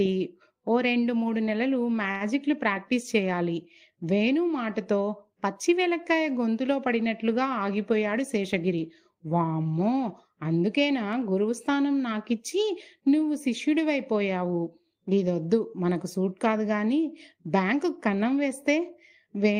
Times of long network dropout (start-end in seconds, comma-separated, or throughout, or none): none